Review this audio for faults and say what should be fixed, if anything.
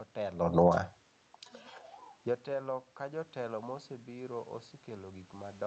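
Automatic gain falling runs from 0.43 to 0.74 s. The gain control judges the input too loud and pulls level down by about 4 dB. The room background sinks along with the speech, which separates it from the talker moving near 0.5 s, where only the voice changes.

Automatic gain rising follows from 0.67 to 1.04 s and restores about 3 dB, so voice and room noise swell together. Here the gain control judges the input too quiet and raises its gain. A real change in the talker's distance would leave the background level steady.

To prevent both, slow the gain control's attack and release, or set fixed input gain, so brief loudness changes don't trigger corrections.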